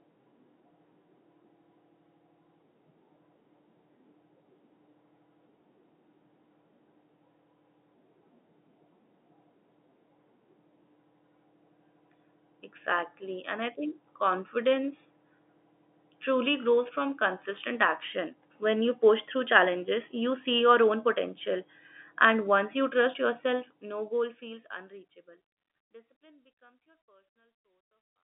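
Nothing here goes wrong: the speech comes through the narrow telephone band as it should, and the gentle fade-out over the last few seconds is just a tidy editor's ending.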